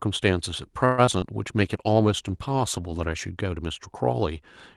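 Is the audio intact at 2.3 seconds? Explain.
No, a call bitrate drop from 1.56 to 3.31 s cuts Opus from 64 to 17 kbps, so coarser coding and lost highs make speech rough and muffled.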